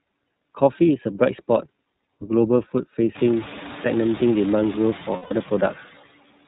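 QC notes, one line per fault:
Throughout: noise suppressor artifacts. The background sinks by about 17 dB in the pauses and swells back up underneath the speech. This is most noticeable after roughly 3 s, when the room noise rises to sit only about 19 dB under the speech. The suppressor pulls down every band it judges to be steady noise, frame by frame. Under that stronger noise its estimates jump around.
Throughout: iLBC codec. The speech is clear and intelligible but has a slightly rough, synthetic grain. The top end stops at 4 kHz. This narrowband VoIP codec rebuilds the excitation of each block independently, and the damage is plainly audible here. The character fits the 13.33 kbps mode with its 30 ms frames.
5.16–5.32 s: lost iLBC frames. For about 150 ms the sound turns into a held, faintly buzzy, breathy vowel-like tone, then snaps back to normal speech almost at once. The length fits five consecutive 30 ms frames going missing. 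The decoder covered the gap by repeating the last pitch cycle blended with noise. Because iLBC frames do not depend on earlier ones, recovery is immediate once packets arrive again.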